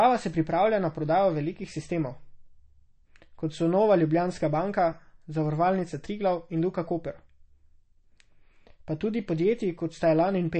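A low-bitrate encode, most likely MP3 compression at a rate fitting roughly 33 kbps, runs through the whole speech clip: the encoder removes everything above 8.3 kHz and switches weak frequency lines on and off, giving plainly audible watery swirl, chirpy sibilants and smeared attacks.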